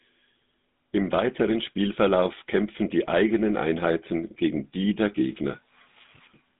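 This speech clip... no, must not start that way.

Speech, carried throughout by the GSM full-rate codec: the band is cut to roughly 150 Hz to 3.7 kHz, and the pulse-driven vocal-tract model gives a plainly audible buzzy, gravelly roughness from start to finish, consistent with a 13 kbps telephone-grade coding path.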